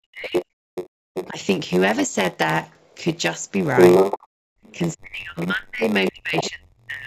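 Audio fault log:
Throughout: block size mismatch (padded). A steady buzz near 93.8 Hz runs under everything, and the sound plays at 0.938 times normal speed with little pitch change. Each block is topped up with silence, which fits a 512-sample block being read from shorter writes.
0.00 to 1.37 s: speech suppressed in double talk. The talker dips sharply, by about 40 dB at worst, for roughly 0.4 s in total. This is likely the echo canceller clamping down while both sides spoke at once.
0.35 to 1.29 s: other side's voice leaking through. A second voice sits about 10 dB under the talker. Its likely source is the far end playing on the loudspeaker and not being fully cancelled from the microphone.
0.90 to 1.00 s: background gated by the echo canceller. The room sound drops by about 38 dB for roughly 0.1 s, then returns. The canceller pulled the microphone down hard while the loudspeaker was active.
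2.72 to 6.50 s: other side's voice leaking through. Here the second voice is louder, roughly 5 dB above the talker, over a long stretch. This likely comes from loudspeaker echo that the canceller failed to remove from the microphone signal.
4.28 to 4.63 s: background gated by the echo canceller. The ambience vanishes for around 0.3 s, falling by about 38 dB, before coming back. The canceller muted the microphone heavily during loudspeaker playback and then released it.
4.95 to 7.06 s: speech suppressed in double talk. The talker is pushed down by up to about 35 dB, to the end of the clip. This is likely the canceller turning both voices down during overlapping talk.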